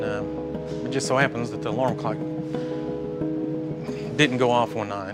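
No technical faults can be heard anywhere in the recording, and the signal holds steady throughout.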